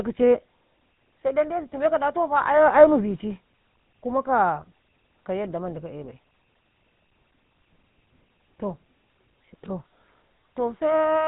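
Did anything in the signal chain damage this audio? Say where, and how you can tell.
Yes. The damage sits at the codec stage: the speech has been through the GSM full-rate codec for the whole clip. The band stops at 3.8 kHz, and the speech has a plainly audible buzzy, gravelly roughness, consistent with a 13 kbps stream. The codec models the vocal tract as a filter and excites it with a sparse, regularly spaced pulse train that keeps only a third of the excitation samples. That coarse excitation produces the grit.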